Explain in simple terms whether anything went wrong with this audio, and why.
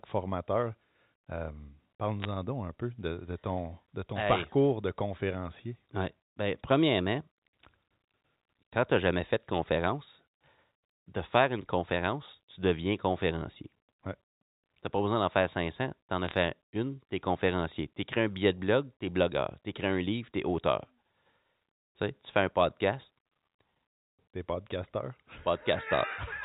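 Bit errors on a digital phone line corrupted the signal in two brief bursts. The speech travels as G.711 telephone coding, where each sound sample is a small number, and flipping even one binary digit turns that sample into a wrong value. The result is quick crackling ticks laid over the speech, first around 2.22 to 2.25 seconds and again around 16.25 to 16.34 seconds. Only a tiny fraction of the digits went wrong.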